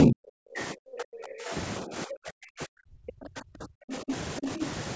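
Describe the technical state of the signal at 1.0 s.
At 1.0 s you're right in the middle of speech suppressed in double talk, which runs from about 0.04 s to 1.53 s. The speech dips hard, sinking by something like 40 dB at its deepest. That's likely the echo canceller hearing both ends at once, failing to tell the near talker from loudspeaker echo, and ducking everything. The call processing's band limit, with nothing above 8 kHz, is the expected part.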